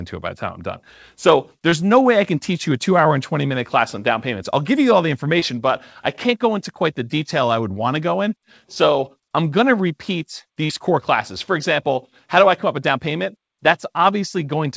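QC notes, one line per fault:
1.70–1.74 s (just before "no way I can"), 5.40–5.43 s (between "give you all the" and "but I can't go"), 10.65–10.71 s (between "I'm going to repeat" and "core classes"): short concealed packet loss. Roughly 20, 20 and 40 ms of audio never arrived. The decoder extended the preceding sound to bridge each gap, so you hear a quick smear or wobble. All of this sits on a call band that stops at 8 kHz.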